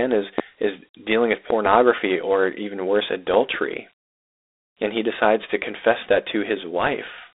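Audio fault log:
throughout: Dialogic VOX ADPCM, speech limited to roughly 300 Hz–3.7 kHz with nothing above 3.8 kHz; coarse 4-bit steps at 32 kbps leave plainly audible gritty hiss trailing the speech.
0.38–0.42 s, 1.50–1.69 s, 3.34–3.57 s: loud pop, a single pop before "is dealing with", a double pop between "is is dealing with" and "or even worse", and a double pop after "or even worse". The pops peak about 10–15 dB above the speech, likely voltage spikes from a switch, plug or static, while the speech carries on underneath.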